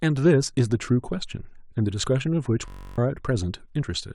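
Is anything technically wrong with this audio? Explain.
Yes, the speech has two distinct faults.

At 2.04 s there is an overlap between stream segments. The clip appears to be delivered in 2-second segments, and at this boundary the time stamps of adjacent segments overlap. The player discards the overlapping portion even though that audio was not actually duplicated, so a few milliseconds of speech go missing and the waveform jumps discontinuously. It is heard as a brief click or tiny skip.

From 2.68 to 2.98 s there is a system hang loop. The host or driver stalled while the audio hardware kept replaying the same ring buffer. A 21.33 ms fragment, which fits a 1024-sample buffer, repeats about 14 times at a rate of 46.9 Hz. Because the loop is so short, it sounds like a steady buzz at that pitch rather than a stutter, and roughly 300 ms of real speech is replaced by it.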